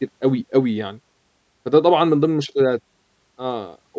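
No technical faults are audible.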